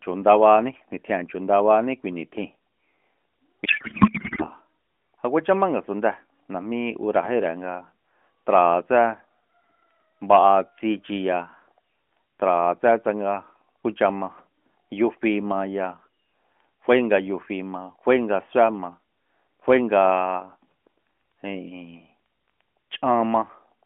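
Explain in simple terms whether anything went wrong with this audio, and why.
Between 3.66 and 4.48 s the speech turns into garbled noise and warble: a codec payload misread. The phone-style AMR decoder unpacked the data in the wrong layout, which fits one packing format being read as the other. Unlike a dropout, sound keeps playing, but it barely follows the speech.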